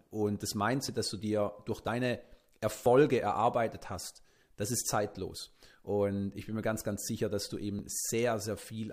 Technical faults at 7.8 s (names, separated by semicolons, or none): overlap between stream segments